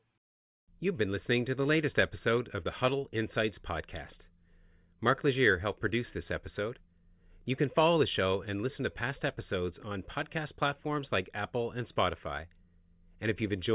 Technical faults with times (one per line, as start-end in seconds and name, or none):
none